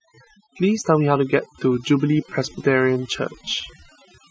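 Overdone noise removal runs through the whole clip: the noise reduction was set too aggressively, pulling individual frequency bands down whenever they sat near its noise estimate. The background collapses into near silence dotted with twinkling specks, and softer speech components vanish.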